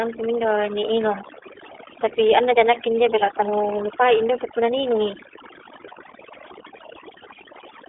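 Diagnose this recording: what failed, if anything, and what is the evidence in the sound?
Across the whole speech clip the background sits at near silence, broken by twinkling, chirpy specks. This is overdone noise removal at the call-processing stage: a noise suppressor set far too aggressively pulls individual frequency bands down or off whenever their level falls close to its noise estimate. The quieter parts of the voice fall under that threshold too, so they vanish along with the hiss.

The voice is also confined to a telephone band, roughly 300 Hz to 3.5 kHz, with nothing at all above 3.7 kHz, and it carries a plainly audible rough, slightly synthetic edge from start to finish. That points to the iLBC codec. The character fits its 13.33 kbps mode with 30 ms frames, where each frame's excitation is coded independently of the one before. That coding makes the speech intelligible but grainy, and the narrowband limit removes all the upper brightness.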